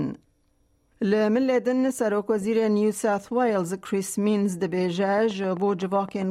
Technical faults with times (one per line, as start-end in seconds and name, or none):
5.18-6.23 train of clicks